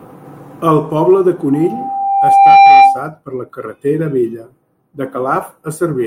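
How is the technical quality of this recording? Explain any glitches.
The recording is marred by loudspeaker feedback squeal. From 1.53 to 3.09 s, after "poble de" and before "per la carretera vella", the microphone re-amplifies its own loudspeaker. Loop gain exceeds one at 790 Hz, so that tone swells over about a second into a squeal roughly 10 dB above the speech.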